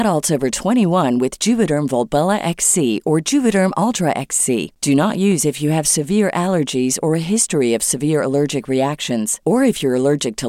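A speech recording marred by periodic USB or driver dropouts. From 0.21 s to 10.43 s, a small tick sounds every 1.02 s, about ten in all. Each one is a tiny gap, far less than a millisecond, where audio is skipped rather than filled with silence. The even spacing points to a background task stalling the USB bus or audio driver on a fixed schedule. The ticks are audible only while there is signal.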